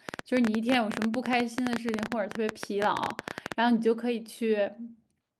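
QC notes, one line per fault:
0.09–3.53 s, train of clicks: roughly fifty similar sharp pulses at about 12.8 per second, unevenly spaced, peaking well above the speech, around 15 dB over it, so they tick through pauses as well; likely interference or a faulty connection injecting them.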